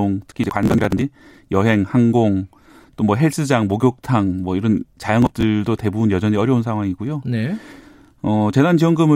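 Processor overload crackle hits this speech clip at 0.30–1.02 s and 5.22–5.43 s: buffers of around 10 ms miss their deadlines and are skipped, leaving a gritty tearing of gaps.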